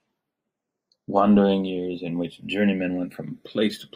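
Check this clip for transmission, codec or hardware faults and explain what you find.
One fault is present across the full length of the speech: the channels drifting apart. The left and right sides behave as if captured by devices on separate clocks, mismatched by something on the order of 150 ppm. The inter-channel delay therefore grows steadily, reaching roughly 0.7 ms by the end. Summed to mono, the resulting comb-filter notches glide slowly through the spectrum, heard as a gradual flanging. A spectrogram would show dark notch lines sweeping slowly in frequency.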